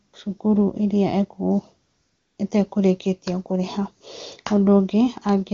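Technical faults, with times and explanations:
0.07 to 0.13 s and 1.87 to 2.37 s, AMR comfort noise: the handset treated these stretches as silence and stopped sending speech frames, so the receiver played synthetic noise built from a rough estimate of the background level and spectrum. The first gap is brief at 60 ms and the second lasts 500 ms. The real room sound gives way to a smooth, even hiss that switches in and then out, in contrast to the clean HD Voice wideband speech around it.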